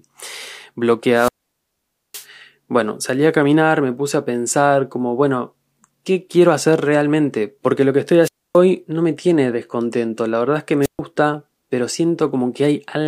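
Three wireless microphone squelch dropouts hit this speech: 1.12 to 2.27 s with a hole of about 0.86 s, 8.22 to 8.57 s muting about 0.27 s, and 10.82 to 10.99 s muting about 0.13 s. Each time the radio signal fades, hiss swells, the receiver's squelch cuts everything, then the voice comes back.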